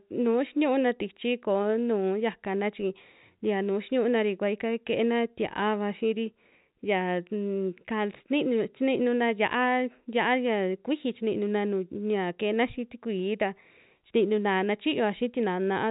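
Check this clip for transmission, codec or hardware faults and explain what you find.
No faults found.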